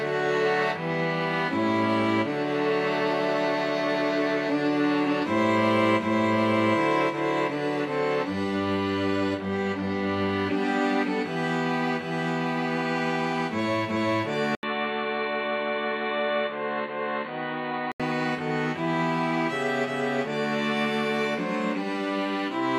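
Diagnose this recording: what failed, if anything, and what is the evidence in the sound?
At 14.55 s there's an 80 ms dropout, and then the sound goes dull and boxy: nothing above about 4.4 kHz, a few dB quieter, with a different, fairly quiet background hiss. It snaps back to full bandwidth at 18.0 s. That points to the capture side, likely an input switched to a poorer device, with the OS or driver rerouting to a narrowband microphone or headset call profile for those three and a half seconds.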